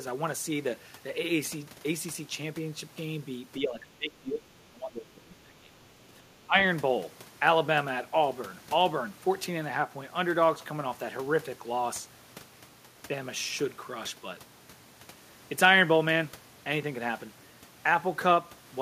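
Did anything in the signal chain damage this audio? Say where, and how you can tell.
Yes. The speech dips at 3.59–4.47 s, 4.68–5.76 s and 6.33–6.55 s, by up to about 20 dB. The fault sits in call processing. It is likely speech suppressed in double talk: the echo canceller confused talker with echo and attenuated both.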